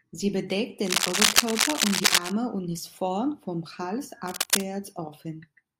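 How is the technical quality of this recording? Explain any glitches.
Two bursts of cable scratch noise spoil the recording: 0.86 to 2.32 s, slightly louder than the speech, and 4.28 to 4.66 s, about as loud as it. Both add rough scratching over the speech, likely from a worn cable or connector moving and rapidly changing its contact resistance. A spectrogram shows dense, ragged broadband smears; the waveform shows irregular, spiky bursts.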